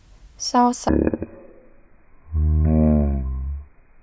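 Wrong sample rate from 0.89 s to the end: speech plays at one third speed, 19 semitones lower and dragging, which fits 48 kHz samples played at 16 kHz.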